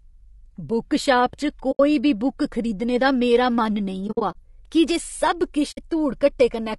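Throughout, the speech sounds rough and grainy, with noise between the harmonics and a thin, synthetic top band. This is likely low-delay AAC compression, AAC-ELD, whose short frames resolve pitch poorly; the damage points to a bitrate around 32 kbps.

At 1.71 to 1.80 s the sound fades into a soft-edged hole, which fits AAC frame loss with muting: the zeroed spectrum and overlapping windows fade it out and in. At 4.07 to 4.35 s similar dropouts are scattered over 280 ms, the longest around 70 ms, and at 5.71 to 5.79 s a brief hole appears.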